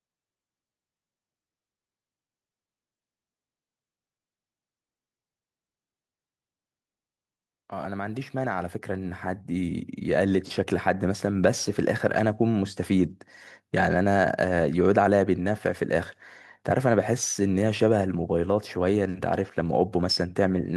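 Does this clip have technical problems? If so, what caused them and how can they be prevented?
Yes. Automatic gain rising from 7.87 to 11.31 s: the gain control judged the input too quiet and ramped up about 10 dB, so background noise swells along with the speech, unlike a talker moving closer. Fixing input gain manually or disabling AGC prevents it.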